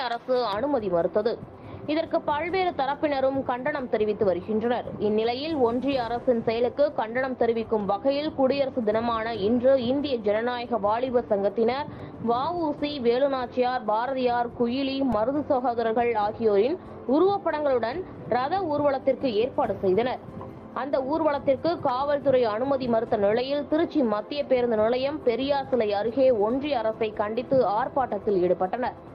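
From 0.53 s to the end, the audio is dull and muffled because de-emphasis was applied wrongly: a treble cut meant to undo pre-emphasis hit material that had none, or was applied a second time. The response falls smoothly toward the top, to about 11 dB down at 10 kHz relative to 1 kHz. On a spectrogram the upper bands look evenly darker and thinner across the whole affected span, with no sharp edge, just a steady downward tilt. Two brief glitches at 12.00 s and 15.12 s come from a repeated buffer: new data arrived late, so the device replayed its last tiny block three extra times, four plays in all, with a hard join at each repeat. The block is about 1.33 ms long, which fits a 64-sample buffer. That is too short to hear as a stutter, so each event comes through as a click or brief buzz with essentially no audio lost. In the waveform, zooming in shows the same short segment copied side by side, with step discontinuities at the joins. 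A spectrogram shows a thin vertical broadband line at each point.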